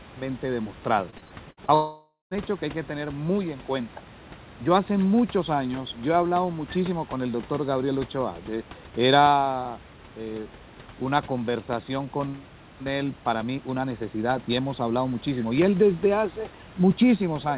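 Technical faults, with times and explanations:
1.1–1.71 s, repeated packet loss (robotic sound): Over about 0.6 s the sound keeps breaking up into a choppy stutter. There are five separate holes, adding up to roughly 210 ms, and the longest is about 60 ms. Each one gets papered over by stretching the last bit of sound, so about 31% of that span is concealment rather than real audio. The holes come close together, one right after another, which gives it that robotic edge. All of this sits on a phone-narrow band with nothing above 4 kHz, typical of a 64 kbps G.711 call.
1.74–2.34 s, long network dropout: Right after the choppy stretch, about 0.57 s of sound is simply gone. What you hear instead is the last sound held over as a smeared buzz that fades away, then a short dead patch of around 150 ms before the audio picks up again with that piece missing. The likely cause is that nothing reached the receiver for over half a second, so the concealment ran dry and gave up.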